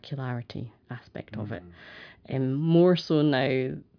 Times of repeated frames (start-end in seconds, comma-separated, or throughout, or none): none